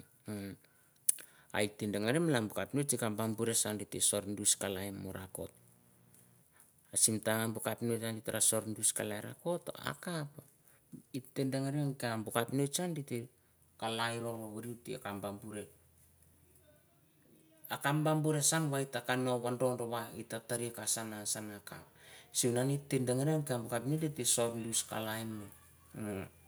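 From 4.54 to 6.42 s, a mains buzz sits under the speech. It is a steady, raspy buzz built on 60 Hz. Its harmonics climb well into the kilohertz range. Something in the power path, such as a dimmer, a rectifier or a missing shield, is leaking sharp switching spikes into the signal. These spikes come twice per mains cycle. The buzz sits roughly 30 dB below the speech.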